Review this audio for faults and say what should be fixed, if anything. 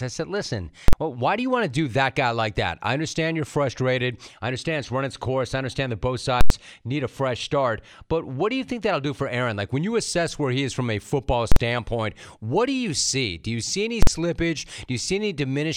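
Four bursts of invalid numbers at full scale cut into the speech. They fall at 0.88–0.93 s, after "I said listen"; 6.41–6.50 s, after "I understand that both"; 11.52–11.56 s, after "is from a football"; and 14.03–14.07 s. Three last about 46 ms, which fits a 2048-sample block. The second lasts about 93 ms, which fits a 4096-sample block. In each block a calculation produced infinite or invalid values. The output jumps to one extreme and sits flat there, far beyond the speech. Each block is heard as a very loud pop or bang in place of the sound. To prevent it, check every processed block for non-finite values and reset or bypass that block before output.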